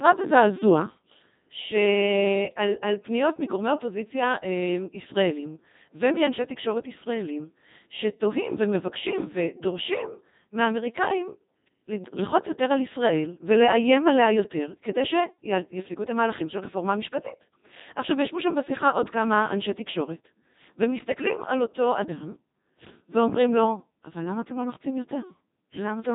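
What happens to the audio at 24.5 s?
At 24.5 s you're hearing the Codec 2 vocoder damage that runs through the whole clip, not a one-off event. The decoder rebuilds the speech from pitch, voicing, energy and a rough spectral shape, summing sine waves, so the original waveform is gone. That's why it sounds robotic and buzzy, with heavy mangling. There's also nothing above 3.8 kHz, and the thinness fits the 2.4 kbit/s mode.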